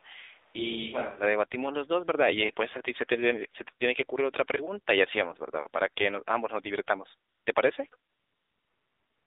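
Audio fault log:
Throughout: AMR narrowband mobile codec. Everything sits inside a phone-line band of roughly 300 Hz to 3.7 kHz, so there's no low end and no air on top. The coding damage is plainly audible: a buzzy, synthetic edge, because the codec rebuilds the sound from a vocal-tract model fed by a few pulses per frame. That degree of artefacting fits a low mode of around 7.4 kbps.
0.00 to 1.22 s: switch to a distant microphone, already in place when the clip starts. For this first stretch the speech sounds roomy and hollow, with thinner bass, and then it snaps back to a closer, drier sound. The level barely moves across the change, and there's a faint room-noise floor well below the speech. A far mic, likely the camera's, standing in for the close one would explain that sudden change in character.
7.30 to 7.46 s, 7.54 s, 7.90 s, and 8.10 to 9.27 s: AMR comfort noise. The phone decided nothing was being said and stopped sending speech frames, so the receiver filled the gaps with smooth synthetic hiss built from a rough level-and-spectrum description. 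The first gap lasts about 160 ms, the two brief ones are single 20 ms frames, and the final one runs about 1.2 s to the end. The noise switches in and out each time.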